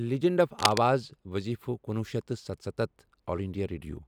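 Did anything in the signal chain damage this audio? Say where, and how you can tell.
Yes. Cable scratch noise runs from 0.57 to 0.80 s, just before "وٕظیٖفہٕ کنُوُہ", a dense, uneven scratching as loud as the speech itself. That points to the analogue wiring: a worn cable or connector likely shifted, its contact resistance fluctuating rapidly.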